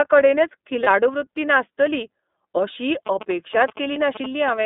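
Speech coming through the iLBC codec, band-limited to roughly 200 Hz to 3.6 kHz, with plainly audible rough, slightly synthetic coding in 30 ms chunks, which fits iLBC's 13.33 kbps mode. There are lost iLBC frames at 0.83 to 0.87 s, just before "वृत्ती नासतली अशी", and again at 3.92 to 3.97 s. Each is a single 30 ms frame filled with a repeated, faintly buzzy pitch cycle, and the sound recovers straight away. Right after that same phrase, from 3.07 to 4.50 s, GSM signalling bursts from a nearby 2G phone cut in as galloping ticks and a 217 Hz buzz, not far below the speech level.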